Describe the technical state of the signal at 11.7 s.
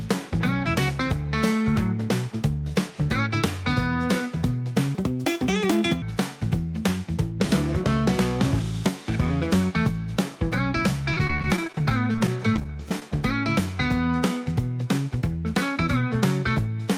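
Choppy sound with small pieces missing: repeated packet loss from 11.13 to 13.02 s, with each dropout of up to 31 ms filled by stretching the preceding sound.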